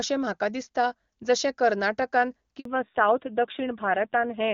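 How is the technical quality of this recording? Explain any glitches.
The recording has two linked glitches in the second half. Before them the call sounds like clear HD Voice, which fits AMR-WB at a high rate with no more than faint codec damage.

At 2.59 s there is a handover gap lasting 60 ms, to 2.65 s. The phone was switching the call between networks, and no speech frames arrived during the switch, so the sound fades within a few tens of milliseconds and then goes silent until the new link takes over. Unlike a lost packet hidden by concealment, nothing is filled in or smeared across the hole. It is a clean, short silence.

From 2.65 s to the end there is a fallback to narrowband. Once the new link is up, the call continues on an older narrowband codec. The sound suggests something like AMR-NB at a low rate, around 7.4 kbit/s. Nothing above 4 kHz survives, so sibilance and airiness disappear and the sound turns dull and rougher. 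What separates this from a simple low-pass filter is that it starts abruptly, right after the gap, and brings added coarseness rather than just less treble.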